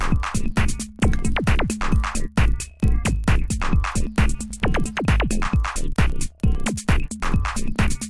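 A resampler restarted on every block runs throughout, converting 48 kHz down to 24 kHz in 40 ms pieces. Each piece's edges lack their true neighbouring samples, leaving a small error there, heard as a steady 25 Hz ticking buzz riding on the sound.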